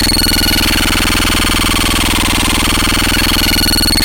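The recording of sounds comes through as a continuous, intact signal with no technical faults to note at any point.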